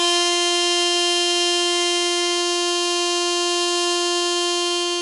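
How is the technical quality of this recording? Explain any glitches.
The technical quality is poor: heavy HE-AAC compression affects the whole piece of music. The codec likely coded only the lower spectrum and synthesised the treble by copying lower bands upward, at what sounds like roughly 12 kbps. The top therefore sounds gritty and metallic, with misaligned harmonics and nothing above 11 kHz.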